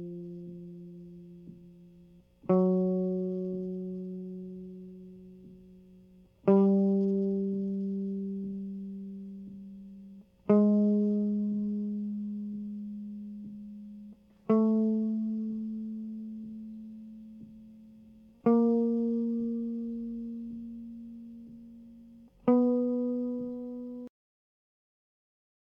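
A music recording with a cut-off end: at 24.07 s the audio stops mid-sound, the final buffers never written, leaving a flat waveform and blank spectrogram, with no decay tail.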